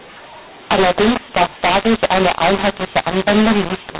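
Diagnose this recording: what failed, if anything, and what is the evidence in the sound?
Codec stage: A-law G.711 speech decoded as mu-law throughout, a mu-law and A-law mix-up. Waveform levels scramble, and pauses fill with noise on the spectrogram.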